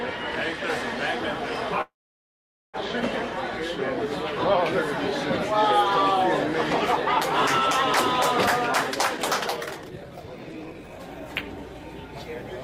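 At 1.81 s the sound stalls in a call audio freeze lasting until 2.77 s. The last fraction of sound is briefly carried on, then about 0.84 s of silence follows before the audio resumes exactly where it left off. The likely cause is delayed packets draining the jitter buffer. Unlike a dropout, nothing is lost: roughly 0.92 s of gap is inserted and the delay grows by that amount.

From 8.95 s to 11.84 s a jitter buffer speed-up makes the sound run at about 131% of normal speed, hurried but at unchanged pitch. To shed the built-up delay, the receiver repeatedly cuts out tiny pitch-period-sized pieces, about a second in total. Because pitch stays put, this differs from a sample-rate or playback-speed error, which would raise the pitch along with the tempo.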